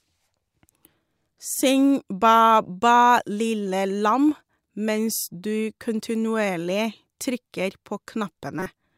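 At 8.60 to 8.66 s, near the end of the speech, a corrupt frame decoded produces a short glitch. Damaged bits in roughly two compressed frames were played anyway, so misread gains and codes put energy at the wrong frequencies, peaking around -15 dBFS.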